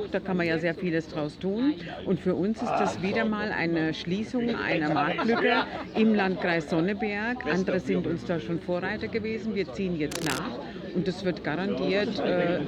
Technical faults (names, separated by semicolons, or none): cable scratch noise